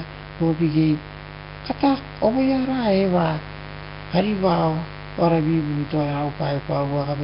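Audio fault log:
throughout mains buzz: raspy 50 Hz buzz sitting roughly 15 dB under the speech, its sharp switching spikes spreading harmonics into the kilohertz range, unlike a smooth, rounded hum.
throughout Nellymoser compression: hissy, noise-filled halo and smeared underwater speech with nothing above 5.3 kHz, likely a heavily squeezed Flash-era codec rather than plain low-pass filtering.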